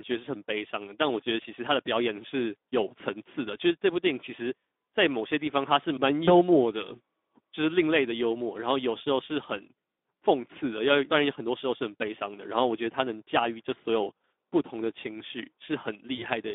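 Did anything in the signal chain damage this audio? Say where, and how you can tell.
Yes. The codec stage damaged it: this speech went through the Speex codec at a low setting, which fits roughly 11 kbps. It sounds hoarse and noisy throughout. A spectrogram shows a telephone band of about 250 Hz to 3.6 kHz, with smeared, noise-filled harmonics instead of clean pitch lines.

Network stage: VoIP packet loss concealed by the speech codec occurs at 6.25 to 6.35 s and 16.15 to 16.24 s. Each gap fits one lost 20 ms packet, but the decoder's extrapolated sound and fading recovery stretch the disturbance to about 0.1 s. The waveform shows a decaying envelope there.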